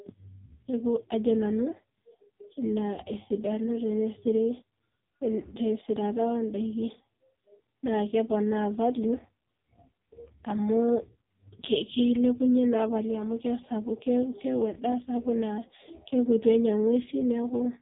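AMR narrowband mobile codec damage runs through the whole of this speech recording. Nothing above 3.8 kHz survives, and the voice sounds heavily buzzy and synthetic because a vocal-tract model driven by sparse pulses rebuilds it, which fits a very low bitrate near 5.15 kbps.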